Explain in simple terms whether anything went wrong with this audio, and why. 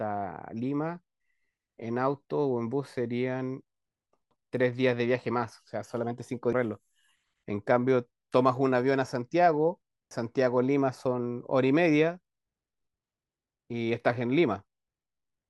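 Three brief glitches break into the speech, at 4.31, 6.53 and 10.11 seconds. They come from damaged data in a compressed stream: small parts of the compressed file were corrupted, so the decoder misread those spots and had to lose and regain its place.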